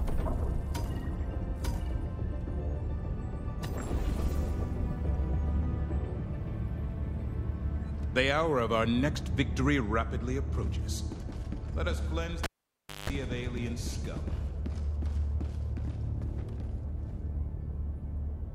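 At 12.44 s a live cable gets pulled and plugged in: pop, about 0.61 s of near silence, a 0.18 s burst of 50 Hz buzz, then another pop by 13.10 s.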